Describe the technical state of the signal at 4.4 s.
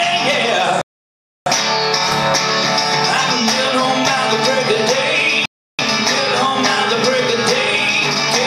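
At 4.4 s the signal is intact, with no audible fault at that moment.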